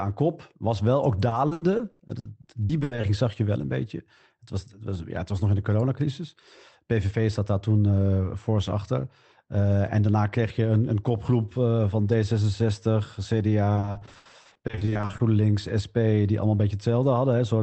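From 1.29 to 3.05 s, just after "wel ook" and before "zag je wel een", the speech hits repeated packet loss (robotic sound). Packets keep going missing. Each hole is bridged by stretching the last bit of sound. Gaps last up to 80 ms, and about a third of the stretch is patched. It sounds choppy, with pieces missing. It returns from 13.75 to 15.21 s, denser, with about half the span patched.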